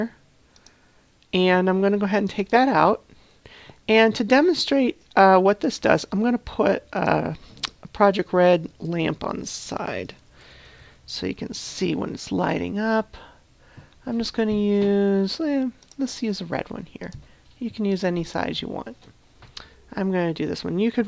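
No technical faults can be heard anywhere in the audio, and the signal stays intact and steady throughout.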